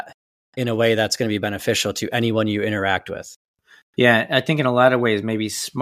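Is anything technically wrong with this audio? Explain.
No, nothing technically wrong stands out here; this bit of speech sounds just as it should the whole way through.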